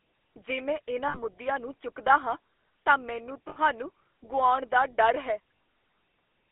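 Speech squeezed through the GSM full-rate codec: a 300 Hz to 3.4 kHz band and a clearly buzzy, gravelly texture, which fits 13 kbps full rate. Lost GSM frames show up as a brief metallic, held ring at 1.08–1.19 s between "ਜੇ ਮੈਂ" and "ਨੂੰ ਚੁੱਕਦਾ ਹਾਂ ਤਾਂ", at 3.48–3.57 s after "ਚੁੱਕਦਾ ਹਾਂ ਤਾਂ ਮੈਨੂੰ", and at 5.59 s after "ਗੁਆਉਣ ਦਾ ਡਰ ਹੈ". Each time the decoder stretches the last good frame.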